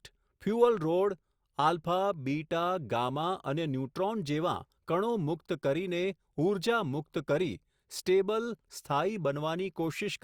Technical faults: none

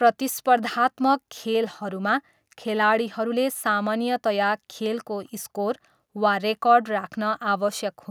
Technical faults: none

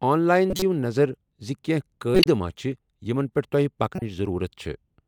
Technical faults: corrupt frame decoded

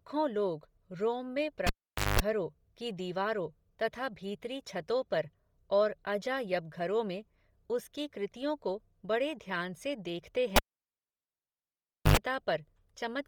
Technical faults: Bluetooth LC3 compression; cable pulled and plugged in

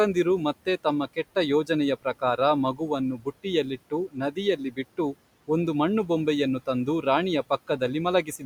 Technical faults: speech cut by the noise suppressor

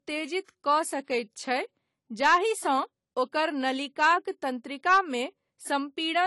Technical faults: low-bitrate audio saved at a high bitrate

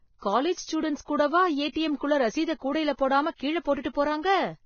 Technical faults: Vorbis compression

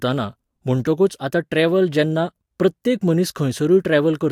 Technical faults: none

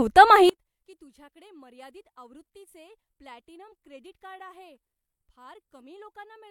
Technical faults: one channel inverted

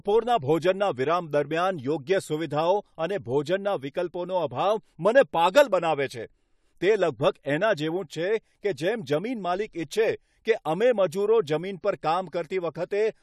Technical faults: pre-echo

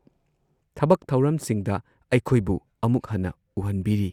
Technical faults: none

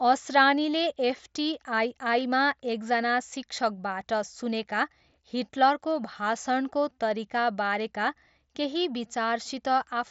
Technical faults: none

